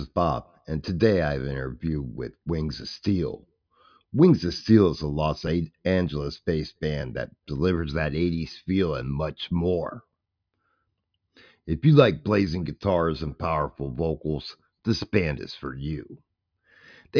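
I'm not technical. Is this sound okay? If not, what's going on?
Yes, this one's fine: nothing in the recording jumps out as a problem, so there's nothing to worry about here.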